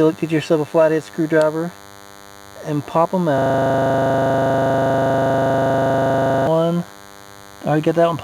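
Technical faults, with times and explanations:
Throughout: DECT cordless phone buzz. A nearby DECT handset or base station pulses its radio transmitter every 10 ms, and the audio circuitry rectifies those bursts, producing a thin, steady 100 Hz buzz rich in harmonics, sitting about 25 dB below the main sound.
3.38 to 6.47 s: system hang loop. The computer or its audio driver stalled while the sound hardware kept replaying the same 40 ms stretch of buffer, about 77 times over. Repeating at 25 Hz, that fragment comes across as a rapid, mechanical stutter.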